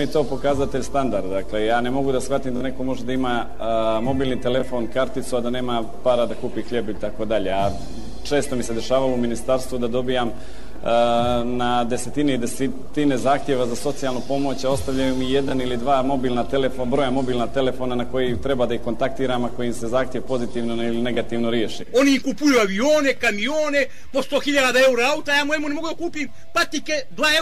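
Six short Bluetooth stutters turn up: 2.57 to 2.61 s, 4.60 to 4.63 s, 10.38 to 10.40 s, 15.49 to 15.51 s, 21.15 to 21.17 s, and at 23.17 s. Each time the link dropped data, so the receiver looped its last little slice of audio until fresh data arrived, giving a quick buzzy repeat. Most gaps are about 20 ms, pointing to one lost packet. The first runs about 41 ms, more like two. Afterward the sound jumps ahead, as though it had kept playing.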